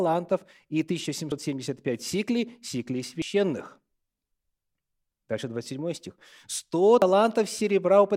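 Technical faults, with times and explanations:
1.32, 3.22, 5.12 and 7.02 s: audio missing between chunks. The speech jumps forward at each point, losing about a tenth of a second, and the two sides join directly with no silence, so a syllable can sound cut short. The even spacing fits processing in 2-second blocks, likely dropping a sliver at each handover. The waveform shows an abrupt envelope discontinuity at each splice, and the spectrogram shows a sharp vertical seam where harmonic lines break and restart out of step.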